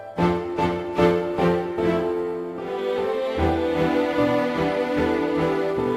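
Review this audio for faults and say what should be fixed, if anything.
No faults turn up in this audio, so nothing needs to be fixed.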